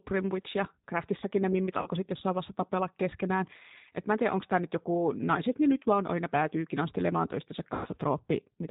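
Speech runs through the G.729 codec throughout, and the damage is plainly audible: a rough, slightly synthetic timbre typical of an 8 kbit/s speech coder. A spectrogram shows nothing above 4 kHz, with smeared, grainy harmonics below. VoIP packet loss concealed by the speech codec occurs twice. From 1.82 to 1.89 s, after "ne mimmit" and before "sitten jossain vaiheessa tapella", about 40 ms went missing, which fits two lost packets. From 7.75 to 7.88 s, after "aina päätyykin astelemaan toistensa", about 100 ms went missing, which points to five lost packets. In both gaps the decoder extended its last pitch and filter into a fading buzzy tone or coloured noise. On the spectrogram this appears as flat, repeated spectra, and on the waveform as a decaying envelope before packets return.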